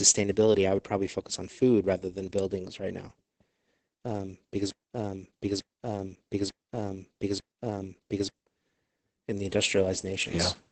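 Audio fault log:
throughout  Opus voice compression: the sound is muffled, hoarse and slightly robotic, with nothing above 8.8 kHz. The heavy damage points to the SILK speech coder at a very low bitrate near 10 kbps. A spectrogram shows a flat ceiling and smeared, grainy harmonics.
4.70–8.33 s  Broken-record loop: just after "um because", a 0.89 s fragment repeats exactly four times back to back, and the speech that belonged there is lost. The likely cause is a stalled stream resending its last buffer. The waveform shows identical repeating blocks.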